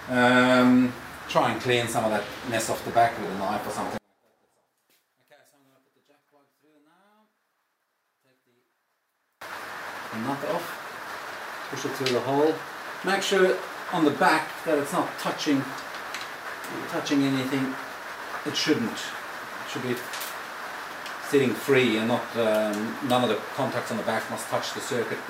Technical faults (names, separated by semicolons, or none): one channel inverted